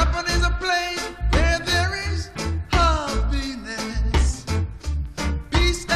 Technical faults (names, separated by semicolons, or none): compressed frames skipped